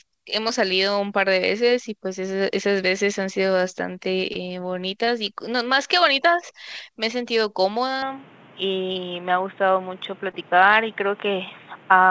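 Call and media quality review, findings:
Short concealed packet loss at 0.48, 4.33, 5.05, 8.93 and 10.31 s: brief smears or wobbles, each roughly 20 ms of speech missing. Jitter buffer/decoder concealment extends the last pitch or noise across each gap, then crossfades back to the received audio.

Input switched to a poorer device from 8.02 s to the end: speech turns abruptly dull and boxy with no gap at the switch. Energy stops near 3.8 kHz, below the 8 kHz ceiling the G.722 path carried earlier. Level shifts by about 5 dB, and a new noise floor sits roughly 30 dB under the speech. Likely a mid-call capture change to a narrower-band microphone or headset call profile.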